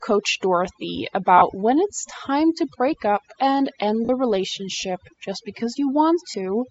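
From the start, the speech carries overdone noise removal. The background drops between phrases and breaks up into small twinkling specks. The reducer was set too hard. It pushed individual frequency bands down or off wherever they sat close to its noise estimate. Quieter parts of the voice fell below that line and were removed with the noise.

The whole clip also has a breathy, grainy edge in the upper range. This is likely Bluetooth LC3 compression, the LE Audio codec. Here the high band has lost real detail and been filled with shaped noise. The damage is plainly audible. It fits a low setting around 32 kbps with 10 ms frames.

Three short breaks come from lost LE Audio frames. The first is at 1.38 s and lasts about 40 ms. The second is at 4.05 s, again about 40 ms. The third is at 6.31 s and lasts about 30 ms. Each sounds like a brief noisy smear in place of the voice. The decoder covered the gap by repeating the last spectrum with scrambled signs. 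Each gap fits three or four lost 10 ms frames.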